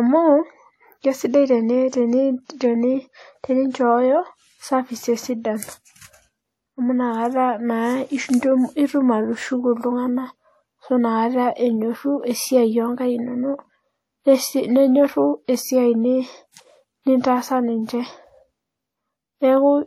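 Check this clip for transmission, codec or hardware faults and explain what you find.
One codec fault runs through the whole recording: WMA compression, most likely. Plainly audible transform damage smears each syllable with ringing and a washy hiss that swells with the speech. Nothing sounds above 16.3 kHz. The coarse quantisation fits a bitrate near 48 kbps.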